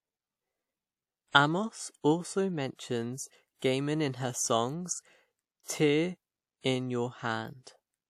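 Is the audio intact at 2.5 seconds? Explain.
No. At 2.5 seconds, as throughout the clip, this is low-bitrate audio saved at a high bitrate: a likely earlier low-bitrate encode was repacked as a large MP3. The first codec's artefacts remain, with nothing above about 18.6 kHz.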